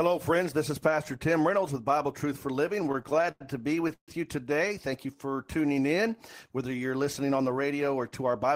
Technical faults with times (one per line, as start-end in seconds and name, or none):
2.83-4.09 repeated stalls (stutter)
5.07-6.21 jitter buffer slow-down